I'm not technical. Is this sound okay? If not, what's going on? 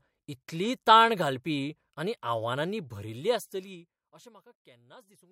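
No. From 3.01 to 4.48 s there's zipper noise. The speech is turned down a long way, but in small jumps instead of a smooth slide. Each jump makes a tiny click, about fifteen a second, so you hear a faint ticking riding on the fade.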